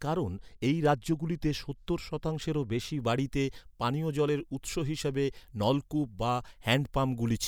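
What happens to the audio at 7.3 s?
At 7.3 s the audio is inside a stretch of pre-emphasis left on, running from 2.99 s, just after "রাজ্যগুলিতে সত্তর শতাংশেরও বেশি", to the end of the clip. The treble was lifted before storage, in a way that fits the CD 50/15 µs curve, but the matching de-emphasis cut was never applied on playback. The top end therefore sits about 8 dB hotter at 10 kHz than at 1 kHz, making the speech thin, bright and sibilant.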